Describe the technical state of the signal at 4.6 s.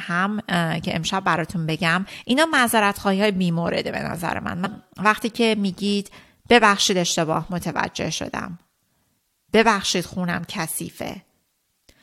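A short glitch cuts through the speech from 4.65 to 4.67 s, lasting only about 20 ms. This is damaged data in a compressed stream: part of the encoded file was lost, zeroed or overwritten, so the decoder misread the frames at that point, lost sync and had to hunt for the next valid frame header before normal decoding resumed.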